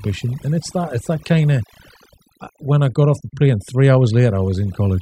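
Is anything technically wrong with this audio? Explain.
Yes. Throughout the speech there is overdone noise removal: a noise reduction stage set too aggressively pulls individual frequency bands down whenever they sit near its noise estimate, taking quiet speech detail with them. The background drops and breaks up into twinkling specks.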